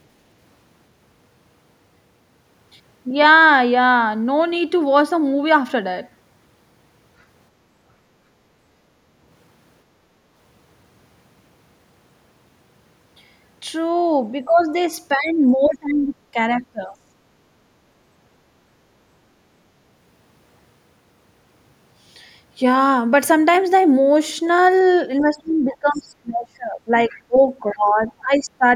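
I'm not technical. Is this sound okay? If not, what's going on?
No. Speech suppressed in double talk, from 14.4 to 17.0 s and 25.2 to 28.6 s: the voice dips or cuts out, likely because the echo canceller muted it while both people spoke at once. Other side's voice leaking through, at 25.7 to 26.1 s, 27.11 to 27.22 s and 27.7 s: faint scraps of a second voice come through, likely loudspeaker sound the echo canceller didn't fully remove.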